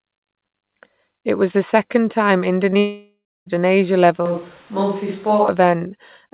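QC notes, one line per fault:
2.70 to 2.77 s, short concealed packet loss, twice in a row. About 20 ms of audio fails to arrive at 2.70 s, then another 20 ms at 2.74 s. Each time the receiver patches the hole by stretching the sound just before it, shaping it from its pitch when voiced or as noise when not, then crossfades back. The result is a brief smear and wobble, and a short consonant can blur away.
2.79 to 3.48 s, long network dropout, likely cause. About 0.68 s of audio never arrives. The receiver keeps extending the last sound as a fading buzz or hiss, and that artificial tail stretches across most of the gap. It dies out into roughly 0.29 s of silence. The sound resumes at 3.48 s, and whatever fell in the gap is simply gone. The call path is capped at 4 kHz.
4.26 to 5.48 s, switch to a distant microphone, likely cause. The pickup jumps abruptly to a farther microphone. The sound turns hollow and roomy, with thinner bass. 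The level falls by about 5 dB. Background room noise rises to around 30 dB below the speech. At 5.48 s the close microphone returns just as suddenly.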